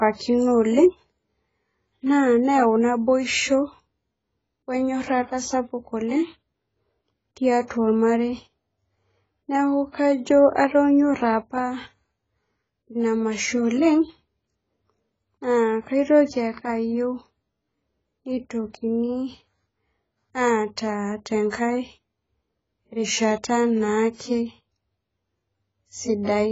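Throughout, the speech was likely squeezed through heavy AAC compression at a low bitrate; nothing remains above 7.7 kHz, leaving it dull, smeared and warbling.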